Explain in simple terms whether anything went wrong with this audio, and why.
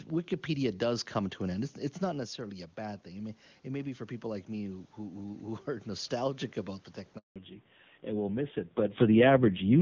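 Three things went wrong.

Just after "end it's it's not", around 2.1 s, the talker's voice drops as they move back from the microphone. From 2.12 to 6.13 s the automatic gain rising effect slowly turns the level back up. A talker simply leaning in would make only the voice louder. Here the room's background noise swells along with the voice, which shows the phone's own volume control was doing it over those four seconds.

Right after "about the", from 7.18 to 7.36 s, there is a handover gap. The phone was switching the call to a different network, and for about a fifth of a second nothing came through. The voice fades out quickly and there is clean silence until the new link picks up. A crackly dropout would sound different. This one is a neat hole, and whatever was said in it is lost.

Right after the handover comes a fallback to narrowband. From 7.36 s to the end, the call continues on an older, lower-quality phone codec, so everything above 4 kHz disappears. 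The voice suddenly turns duller and rougher, like an old landline. A talker turning away would fade gradually. This change happens in one step at the switch and never recovers.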